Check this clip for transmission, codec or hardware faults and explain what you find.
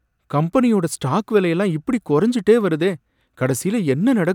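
No faults turn up anywhere in the clip.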